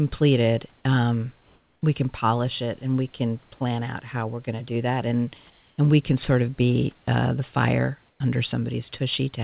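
Speech over a call path that cuts everything above 4 kHz. At 5.50–5.78 s and 8.10–8.20 s, the room background turns to flat, featureless hiss rather than the dead silence of a dropout, likely comfort noise in place of the background.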